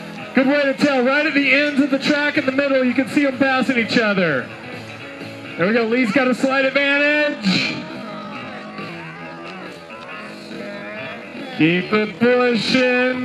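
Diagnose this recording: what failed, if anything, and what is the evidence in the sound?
From 7.19 s to the end, the pace abruptly drops to roughly 0.55 times normal speed while the pitch stays put. The slowed sound drags, as short stretches are repeated to fill the extra time. This is a time-stretched section, likely the work of software in the processing or storage chain that lengthened the audio to fit a target duration, holding pitch by repeating small pieces rather than resampling.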